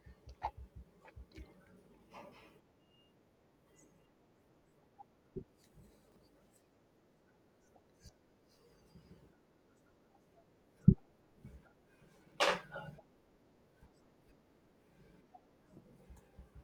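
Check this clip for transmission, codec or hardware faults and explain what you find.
Chunks out of order occur twice in this speech clip, from 6.08 to 6.16 s and from 12.24 to 12.32 s. In each span, a 40 ms block of audio was delivered or written one chunk late, so it plays after the block that should follow it. No audio is missing, but the swapped pair creates three abrupt joins. The sound briefly jumbles over that 80 ms stretch.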